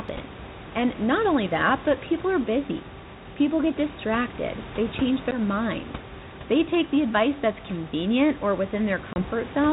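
At 5.31 to 5.40 s, just after "get distracted they change", and again at 9.13 to 9.24 s, after "advice that's convenient or", packet loss on an ADPCM call cuts the speech. About 10 ms goes missing first, about 30 ms second, which fits roughly one and then three lost packets. The waveform drops to a flat, hard-edged gap and the spectrogram shows a clean vertical stripe. Because the decoder's adaptive predictor and step size fall out of step with the sender's, speech comes back with brief distortion before settling.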